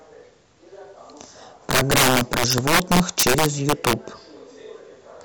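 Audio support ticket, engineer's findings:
Integer overflow, 1.71 s to 3.93 s: violent cracks on louder speech peaks, far harsher than clipping. Gain stage overdriven by about 14 dB, with no saturation, so samples past full scale wrap to the opposite sign. Waveform shows full-range flips at peaks. Spectrogram shows broadband vertical streaks.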